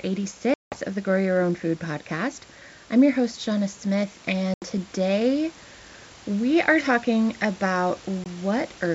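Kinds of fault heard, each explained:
Packet loss on an ADPCM call: sharp-edged silent gaps of 180, 80 and 20 ms, after which the sound resumes with brief distortion as the decoder's predictor and step size recover. On a waveform, flat holes; on a spectrogram, blank vertical bands.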